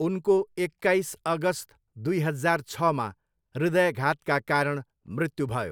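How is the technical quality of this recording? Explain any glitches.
The recording's technical quality shows no glitches to explain.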